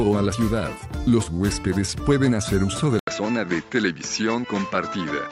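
At 2.99 s there's a brief 80 ms gap, and from there to the end the sound loses everything above 7.6 kHz and gains a faint new noise floor, about 40 dB down, at much the same level. Likely an input switched to a poorer device.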